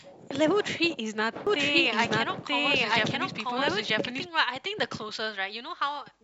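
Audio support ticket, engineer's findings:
Doubled audio track, 1.47 to 4.27 s: speech plays twice, second copy trailing by about a second at roughly the same level, full-band, no decay, cuts in and out abruptly. Likely a second capture path or an edit leaving two copies out of step.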